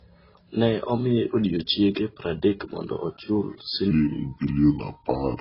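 From the start the speech sounds dull and smeared, with nothing above 5.5 kHz, and two kinds of compression artefact overlap: swirly, watery highs and blurred consonant edges. This points to transcoding between lossy codecs, likely a low-rate AAC encode later re-encoded to Vorbis, each stage adding damage.

At 3.91 s, right after "odiechienge pradek mondo ochul", the speech suddenly drops deep and drawls through to the end. This section at the wrong speed runs at 0.748 times normal, about five semitones low, likely from playback against the wrong clock.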